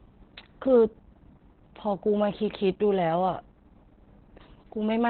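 Throughout, the speech sounds muffled, hoarse and faintly robotic, with nothing above 4.3 kHz: heavy Opus voice compression, consistent with narrowband SILK at around 8 kbps.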